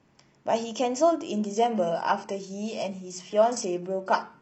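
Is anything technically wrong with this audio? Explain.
Yes. From about 1.32 s to the end, the speech switches abruptly to an adaptive stream at a lower bitrate. There's no gap, just a sudden drop in quality. The player seems to have hit a slow connection and fallen back to a much leaner encoding. What you hear fits a move from a roughly 96 kbit/s AAC stream to a 16 kbit/s HE-AAC one: coding artefacts rise.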